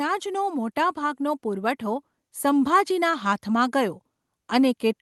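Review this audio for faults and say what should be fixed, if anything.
Automatic gain rising from 0.05 to 4.83 s: the gain control judged the input too quiet and climbed about 8 dB, so speech and background swell together. Set a fixed input level with adequate headroom, or slow and cap the automatic gain control.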